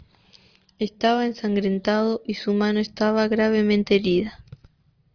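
A speech recording in which no technical fault can be heard anywhere in the signal.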